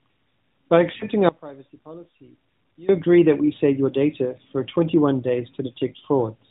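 Lost AMR speech frames at 0.98 to 1.04 s: a single 20 ms frame failed to decode, and the decoder filled the gap by repeating the previous frame's pitch and vocal tract settings at lower gain. The narrowband speech, lightly coloured by the 12.2 kbps codec, briefly dips and wavers there.

One channel inverted from 1.29 to 2.89 s: the speech drops by about 22 dB, leaving only a faint residue. The likely cause is reversed polarity on one stereo channel, so the shared centre content cancels when both channels are summed to mono.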